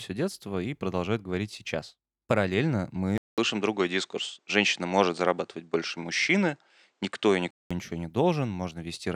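Speech whose input likely switched to a poorer device at 3.18 s, just before "ничего не", after a 0.2 s silence, and back at 7.71 s. In between, nothing above 9.2 kHz gets through, so the sound turns duller, with a modest level shift and a faint new background noise.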